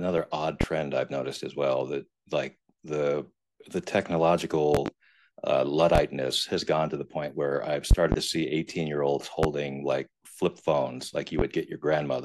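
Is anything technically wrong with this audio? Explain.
Yes. Loud pops sit on top of the speech at 0.61–0.65, 4.75–4.90 (double), 5.95–5.99, 7.91–8.16 (double), 9.43–9.47 and 11.39–11.43 s. Each is a sharp thump, roughly 20 dB above the speech. The speech continues underneath. A likely cause is brief voltage spikes, such as static or a connector glitch.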